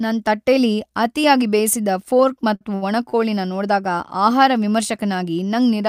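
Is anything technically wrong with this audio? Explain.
Yes, the speech has three short stalls from a late packet, at 2.55–2.63 s just after "ತಟ್ಟೆಲಿ ಅತಿಯಾಗ್ ಬೇಯಿಸಿದ ಫೋರ್ಕ್", at 2.75–2.84 s, and at 3.10–3.15 s. Each time the jitter buffer ran dry, so the receiver held the last sound for 52, 72 and 32 ms until the packet arrived, then resumed without loss. Each stall is heard as a briefly frozen sound with a slight buzz or dip. On a spectrogram it shows as flat, horizontally smeared bands, and on the waveform as a repeating, unchanging stretch.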